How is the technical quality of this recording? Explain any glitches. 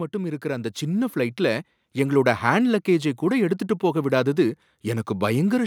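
One glitch stands out. Automatic gain rising, from 0.11 to 2.38 s: the gain control judged the input too quiet and raised its gain step by step over those two seconds, by about 7 dB, so the speech and the background noise swell louder together.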